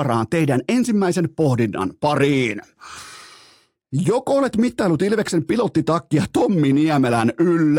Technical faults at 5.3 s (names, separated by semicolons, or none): none